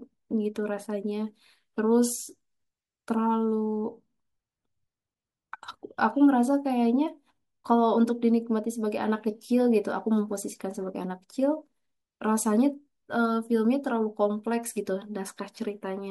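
A speech recording, and there's nothing technically wrong with it that a listener could pick out.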